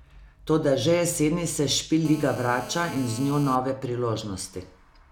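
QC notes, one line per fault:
2.05–3.56 s, GSM phone buzz: steady, raspy 217 Hz buzz about 16 dB below the speech, from a nearby phone's call bursts getting rectified in the audio circuit.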